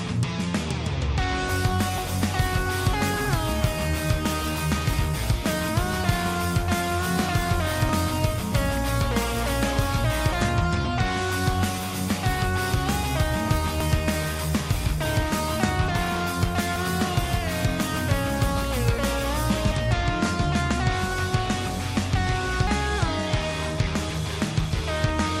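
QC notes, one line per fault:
7.89, 10.85, 13.81 and 22.67 s: audio missing between chunks. Brief seamless skips at about 3 s spacing, likely a few tens of milliseconds dropped at each chunk change.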